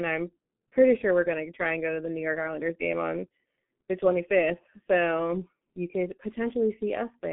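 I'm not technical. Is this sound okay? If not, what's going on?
No. The speech has been squeezed through an old internet-phone codec called G.723.1, and the damage is heavy and lasts the whole clip. This codec throws away everything above about 3.7 kHz, so the speech sounds muffled, like a cheap phone line. It also packs the sound into very little data and rebuilds the voice only roughly. That makes the speech hoarse and the consonants blurred and hard to tell apart.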